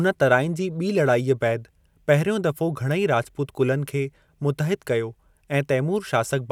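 No technical faults can be heard anywhere in the speech recording, so there is nothing in the signal to place in time or explain.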